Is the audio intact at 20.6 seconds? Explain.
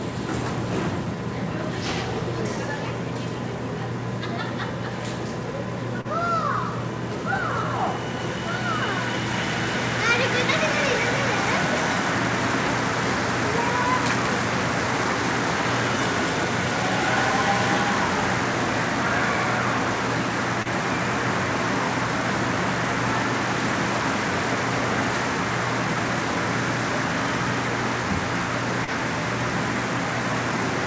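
No. There is short concealed packet loss from 20.62 to 20.68 s: about 30 ms arrived too late and was filled by extending the preceding sound, heard as a brief smear or wobble.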